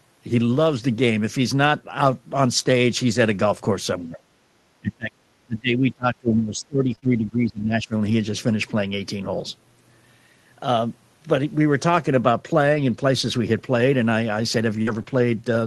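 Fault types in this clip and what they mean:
Speech suppressed in double talk: Most likely the echo canceller mistaking the talker for loudspeaker echo while both sides spoke. The speech dips by about 15 dB around 3.99 to 4.19 s, then sinks by up to about 30 dB for roughly three seconds from 4.8 to 7.94 s.
Background gated by the echo canceller: For a brief moment at 4.47 to 4.52 s, the canceller clamps the microphone while the far end plays. The room sound drops by about 13 dB for around 50 ms, then recovers once the suppression releases.
Lost packet rebuilt from error correction: Opus played low-bitrate redundant copies in place of missing packets, so there is no audible gap, only brief rougher, noisier patches. These occur at 6.87, 7.04, 8.06, 12.74, 14.87 to 15.01 and 15.06 s, lasting 20 to 80 ms each.
Short concealed packet loss: Single 20 ms packets never arrived, so the decoder extended the preceding sound and crossfaded back. 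This gives small smears or wobbles at 6.95 and 6.99 s, which run back to back, and again at 15.03 s. The fills span 12 to 28 ms.
Burst of packet loss: Around 14.82 to 14.89 s, 40 ms of consecutive audio went missing. The decoder stretched and faded the last sound for about 46 ms, producing a held, thinning tail before the stream resumed with that stretch skipped, just before rebuilt frames take over.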